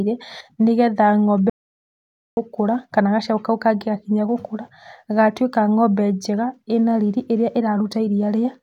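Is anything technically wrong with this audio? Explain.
Yes. An audio dropout to silence cuts the speech from 1.50 to 2.37 s, likely from lost input. The gap is silent, with none of the faint room tone a gate leaves.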